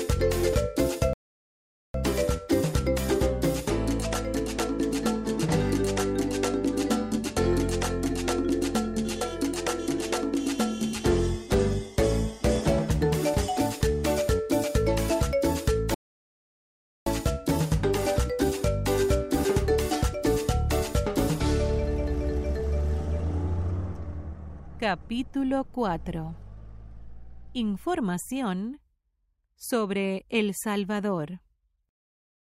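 Rebuffering stalls at 1.13 to 1.94 s and 15.94 to 17.06 s cut the audio to silence for about 0.81 s and 1.12 s. The player exhausted its downloaded data and waited for more, then resumed exactly where it stopped, adding time without losing content.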